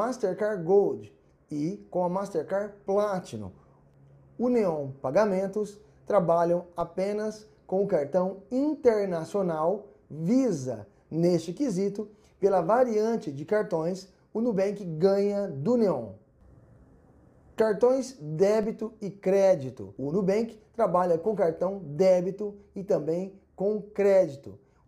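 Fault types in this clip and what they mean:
DC step: a low thump at 6.81 s and again at 18.63 s, the sound itself carrying on unchanged. Each time the waveform's zero line jumps by about -33 dBFS, then the offset drains away through a 20 Hz high-pass rather than holding.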